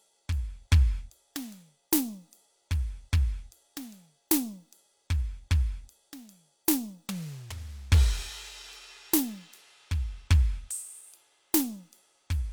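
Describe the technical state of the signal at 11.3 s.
Nothing is wrong with the music at 11.3 s; the signal is intact at that moment.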